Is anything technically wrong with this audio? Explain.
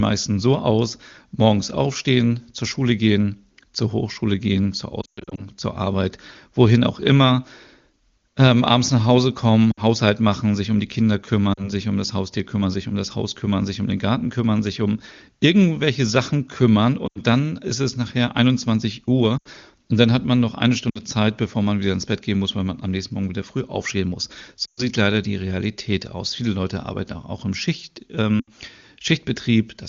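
Yes: the speech has lost AMR speech frames. Brief dropouts occur at 5.01 to 5.46 s (after "gehen zur"), 9.72 to 9.80 s, 11.53 to 11.72 s, 17.07 to 17.21 s (before "dann ist es nachher"), 19.37 to 19.48 s (before "und dann hat man"), 20.90 to 21.01 s, 24.66 to 24.84 s and 28.39 to 28.49 s. The others each lose 40 to 120 ms. The worst is at 5 s, where 240 ms goes missing across 360 ms, including a 120 ms stretch. The speech falls toward near silence within a couple of frames, then returns weak or rough for a moment. Corrupted frames failed their checksum. The AMR wideband (HD Voice) decoder then filled each gap by repeating its last good pitch and vocal-tract settings with falling gain.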